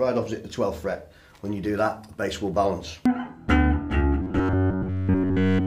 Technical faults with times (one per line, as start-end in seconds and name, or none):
4.22-5.66 robotic sound from repeated short buffers